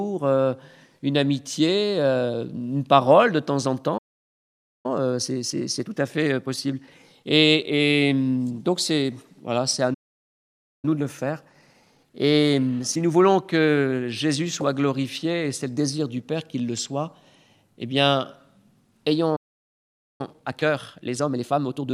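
Three playback stalls interrupt the sound, most likely because the player ran short of buffered data or its output thread was held up, leaving nothing to send to the output. Each time the audio cuts off mid-flow and goes silent for a little under a second: from 3.97 to 4.86 s (about 0.86 s), from 9.94 to 10.85 s (about 0.89 s), and from 19.36 to 20.21 s (about 0.83 s). After each gap the sound picks up again. Each stall is followed by time-compressed catch-up, as the player works off the backlog that built up during the silence by dropping short slices of audio and cross-fading across the joins. The sound is rushed while its pitch stays put. This runs from 4.86 to 7.86 s at 1.15 times normal speed and from 10.85 to 13.85 s at 1.1 times. From 20.21 to 21.87 s, near the end, it runs at 1.5 times, where the hurry is strongest.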